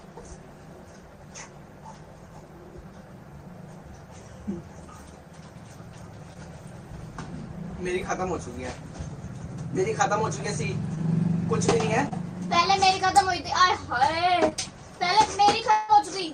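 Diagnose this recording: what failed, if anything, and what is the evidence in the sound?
The network stage is where this falls down. There's short concealed packet loss at 6.33, 10.95, 12.09 and 14.49 s: each time about 20 ms went missing and the decoder stretched the previous sound over the gap before blending back, so you hear a quick smear or wobble.

Near the end there's a longer gap at 15.71 to 15.90 s, likely a long network dropout. The receiver filled roughly 175 ms by extending the last sound as a fading buzz or hiss, with no full silence, then the audio jumps forward without the missing stretch.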